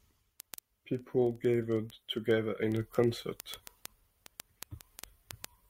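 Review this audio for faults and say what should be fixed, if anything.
Word clock ticks run through the speech from 0.13 s to 5.67 s. They come roughly every 50 ms, over a hundred in all, sharp and uneven in strength. The receiver is free-running against the sender. The drift is around 500 ppm, and each slip drops or repeats what sounds like a single sample. To prevent it, lock the receiving device to the incoming digital signal or a shared word clock.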